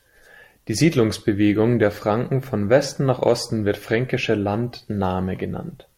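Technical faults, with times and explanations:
Nothing stood out on listening to the speech here; no technical fault was heard at any point.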